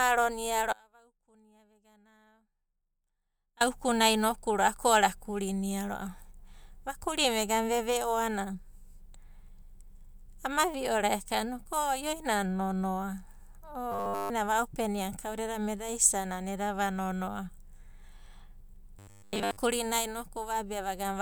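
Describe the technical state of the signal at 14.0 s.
At 14.0 s the speech has collapsed into robotic sound from repeated short buffers, lasting from 13.92 to 14.30 s. The whole span is a metallic buzz at 100 Hz, likely from a roughly 10 ms chunk being replayed while fresh audio was late and skipped. A spectrogram shows rigid horizontal harmonics every 100 Hz, and the waveform shows identical cycles repeating every 10 ms.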